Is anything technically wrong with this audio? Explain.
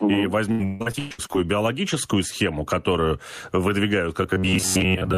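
Yes, there are three faults.

Throughout the clip there is gain pumping. The input gain was likely set far too high for the microphone, so a fast limiter or compressor keeps pulling it down on loud sounds. The level swings by about 15 dB, leaving loud and soft parts squashed closer together.

From 0.51 to 1.36 s, just before "биологическую схему которую выдвигают", there is repeated packet loss. Nine gaps open in quick succession, the longest 146 ms, and about 520 ms of audio goes missing. Each hole is patched by extending the last sound, so about 60% of the stretch is concealment, and the result is choppy with pieces missing.

From 4.23 s to the end, after "биологическую схему которую выдвигают", the audio turns robotic from repeated short buffers. New audio likely arrives too seldom, and the last fragment is replayed while the real signal is skipped. The replays impose a rigid 93.8 Hz buzz, which fits a buffer of about 11 ms. 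Most of this stretch is repeated material, so it only roughly follows the original.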